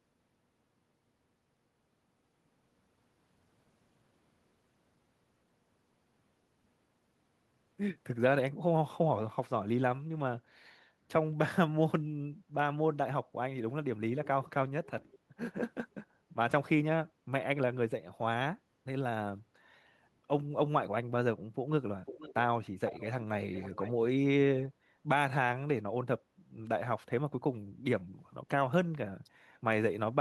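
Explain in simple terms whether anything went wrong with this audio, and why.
Echo leak at 15.12–15.17, 22.06–22.34, 22.87–23.08 and 23.52–23.92 s: a half-second-delayed copy of the speech, likely sent back by a speakerphone's incomplete echo cancelling.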